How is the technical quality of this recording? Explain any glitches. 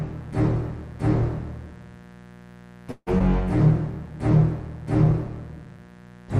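The recording has a continuous hum and two brief playback disturbances close together near the middle.

Mains buzz runs through the whole clip, about 25 dB below the signal. It is based on 60 Hz. Sharp switching spikes, from a dimmer, a rectifier or an unshielded line, enter twice per mains cycle and spread a dense series of 60 Hz harmonics well up into the kilohertz range. The result is a steady, raspy buzz under the audio rather than a smooth low hum.

A call audio freeze occurs from 2.91 to 3.09 s. The audio stops advancing, and the last sound is held and extended as a fading buzz or hiss for about 153 ms. The final 50 ms of that stretch is silent. Nothing is lost. When the audio resumes it picks up exactly where it stopped, so the pause is an inserted gap that pushes everything after it about 153 ms later. The likely cause is delayed packets leaving the receiver's jitter buffer empty.

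A skip ahead follows almost immediately, from 3.19 to 3.22 s. Roughly 70 ms of audio is discarded, and only about 11 ms of fill bridges the join, so playback jumps forward with a near-direct splice. This is what happens when a block of audio is dropped while later material is already queued, for example when the jitter buffer overflows. Here it wins back about 50 ms of the delay the freeze added.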